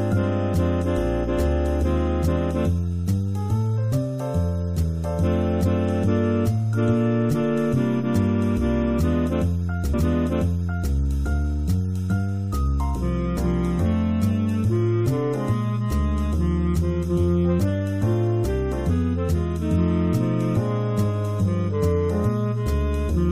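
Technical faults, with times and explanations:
9.93–10.93 s, stream segment repeated: the player fetched or queued the same segment twice, so about 1.0 s of audio plays again after a brief blip at the jump back.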